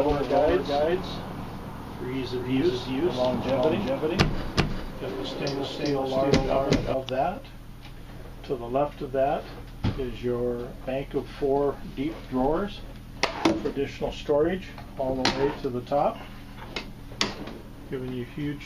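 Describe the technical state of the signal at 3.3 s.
At 3.3 s a doubled audio track is running. It lasts from the start to 6.94 s. A full-band copy trails by about 400 ms at roughly equal level. It is likely a second capture path or misaligned edit.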